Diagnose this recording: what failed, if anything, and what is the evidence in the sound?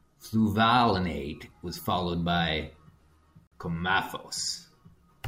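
The failure is at the codec stage, a gap at a join of encoded pieces. At 3.47 s the speech drops out for about 47 ms, until 3.52 s, then resumes exactly where it stopped, with nothing lost. On a waveform this is a flat stretch with abrupt, slightly smeared edges. A spectrogram shows a clean vertical blank across all frequencies. Separately encoded segments, which fit a 4-second piece length, were joined without trimming encoder delay and end-frame padding, so both remained as silence.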